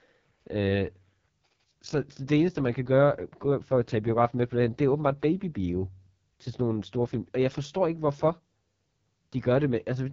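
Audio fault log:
Throughout: AMR wideband (HD Voice) codec damage, heavy. The speech sounds rough and raspy, with nothing above 7.5 kHz. That fits the codec's lowest rate, around 6.6 kbit/s, where the vocal tract model has too few bits. The top band is also noise-filled rather than coded.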